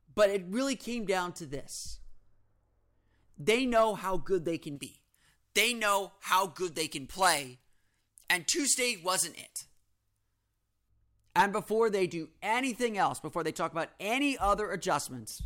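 Speech, with pre-emphasis left on from 4.76 to 10.89 s, just after "how good they can": treble rises about 11 dB at 10 kHz, a steadily climbing tilt matching a J.17 curve rather than a fixed EQ shelf.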